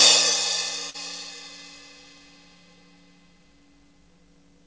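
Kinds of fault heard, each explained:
Short stall from a late packet: A packet arrived after its playout time, so the jitter buffer briefly ran dry. The receiver held the last sound in place to cover the gap. Here the hold lasts about 42 ms, from 0.90 to 0.96 s. Nothing is lost, and playback resumes from the same point. The sound is stretched slightly there, and everything after it runs 42 ms later. The G.722 call path keeps nothing above 8 kHz.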